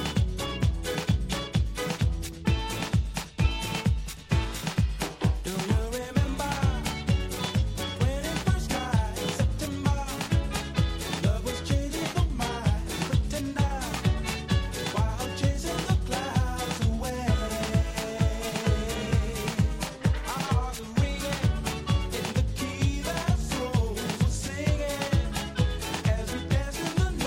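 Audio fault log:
12.04–12.77 s, drift correction step: for about 0.73 s the sound slows by 5.3% and drops about 95 cents, close to a semitone, then snaps back to pitch. The likely cause is a clock-matching resampler stepping its playback rate at once to rebalance its buffer.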